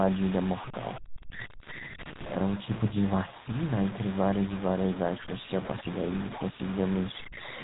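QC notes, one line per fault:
Throughout, low bit depth without dither: quiet passages turn gritty and the softest moments sputter between steps. The grain is only about ten dB below the speech and moves with it, rather than hissing steadily like dither. This likely comes from truncation to something like 5 bits.
Throughout, GSM full-rate codec: speech carries a buzzy, gravelly roughness and nothing above 3.8 kHz, which fits a 13 kbps GSM stream. Pulse-driven vocal-tract modelling causes the buzz. Unlike quantisation grit, it comes with the hard band limit.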